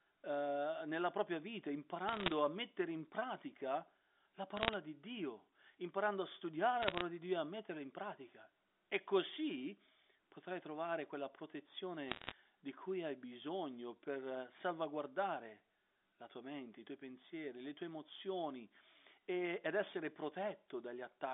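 Four short bursts of bit errors on a digital phone line turn up at 2.08 to 2.32 s, 4.57 to 4.74 s, 6.82 to 7.02 s and 12.08 to 12.32 s. Flipped bits corrupt individual samples, and when a sign or high-order bit gets hit you hear a sharp tick, so each burst comes across as a brief crackle over the speech. The error rate runs around 0.4 percent to one percent, worst at 12.1 s.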